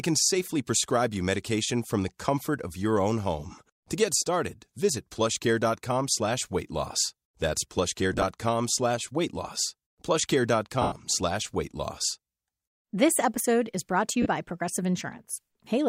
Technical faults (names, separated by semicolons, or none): lost LE Audio frames